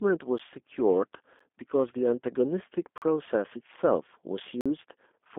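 From start to finish the speech sounds thin, boxy and faintly synthetic, with a rough, buzzy edge. Nothing above about 3.6 kHz is present and the low end is cut below roughly 250 Hz, so the sound sits in a narrow telephone band. This is the G.729 codec (the G.729A variant) at 8 kbit/s. It models each 10 ms frame as a vocal tract filter, a pitch predictor and a handful of pulses, and the coding damage is plainly audible.

At 0.38 s and again at 1.39 s there are brief ticks, each an abrupt dropout lasting about 12 ms. These are blocks of digital silence: the signal falls straight to zero and snaps back with no fade. The length fits a 512-sample buffer that was not filled in time. Longer holes follow from 2.98 to 3.02 s (about 41 ms) and from 4.61 to 4.66 s (about 46 ms). These sound like distinct short holes rather than ticks, and the last one fits a 2048-sample block going unfilled.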